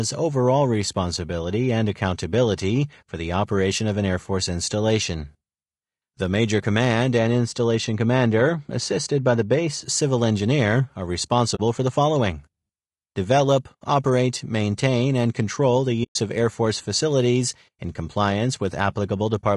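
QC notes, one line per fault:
Throughout, low-delay AAC compression: the encoder was likely running a low-delay AAC-ELD mode at a modest rate; the damage is plainly audible and points to roughly 32 kbps. The short transform frames cannot separate the speech harmonics finely, so the coder spends its limited bits poorly. Voiced sounds come out rough and grainy, with noise filling the gaps between harmonics and a thin, somewhat artificial upper band.
7.18–9.83 s, de-emphasis applied wrongly: a treble-cut filter meant to reverse pre-emphasis was applied where none existed, or applied a second time. The response falls away smoothly toward the top, by about 11 dB at 10 kHz relative to 1 kHz. The speech turns dull and muffled for this stretch, with consonant detail softened, until just before "civil engineer are" brightens again.
11.55–11.60 s and 16.03–16.16 s, AAC frame loss with muting: frames went missing and the decoder replaced their spectrum with silence. 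The first gap, after "civil engineer are" and before "for the following", lasts 40 ms, which fits about two frames. The second lasts 120 ms. Overlapping windows fade the speech out and back in, so each is a soft-edged dropout.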